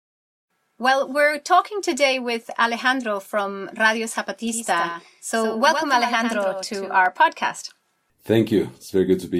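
From 4.52 to 7.06 s the speech is joined by a doubled audio track: a full-band copy trailing by roughly a tenth of a second, around 10 dB quieter, likely from a second, slower capture path. It sounds like a dry slapback. On a waveform, every onset has a fainter twin just after it. The copy starts and stops abruptly.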